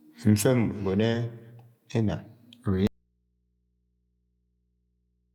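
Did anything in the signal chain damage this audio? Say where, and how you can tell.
Yes: an audio dropout to a faint residue at 2.87 s, likely a broken analogue connection. The speech cuts abruptly to mains hum about 45 dB down, showing on a spectrogram as thin horizontal lines until the end.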